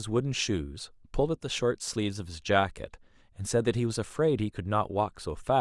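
No technical faults can be heard anywhere in the recording.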